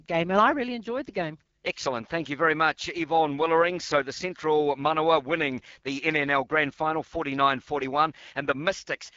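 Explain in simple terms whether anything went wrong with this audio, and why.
Throughout the clip, the speech sounds rough and raspy with its crisp top end missing, because the AMR wideband (HD Voice) codec squeezed it at a low quality setting.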